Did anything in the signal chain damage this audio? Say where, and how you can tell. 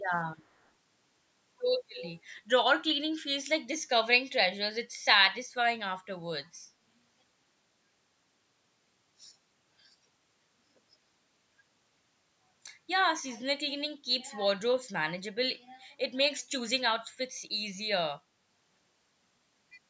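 Yes. At the call-processing stage, a far-end loudspeaker echo canceller likely let residual sound back into the send path. The resulting echo leak puts a copy about 326 ms late, very faint at 0.17–0.21 s and 0.46–0.69 s, then much louder at 1.96–2.11 s.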